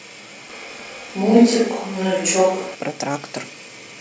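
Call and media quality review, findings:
Speech suddenly roomy, hollow and thin from 0.50 to 2.75 s, level about unchanged, room noise about 30 dB below speech; likely switch to a distant microphone.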